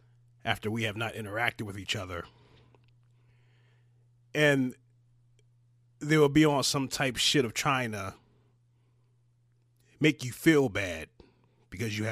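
Nothing in the recording stood out as a technical problem on listening.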